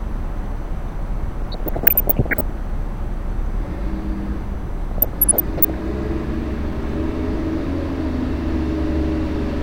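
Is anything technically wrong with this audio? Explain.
Yes. There is DAB burbling in two bursts, from 1.41 to 2.41 s and from 4.91 to 5.74 s. Weak reception let bit errors, a fraction of a percent, slip past error correction. It puts short blips of noise over the sound.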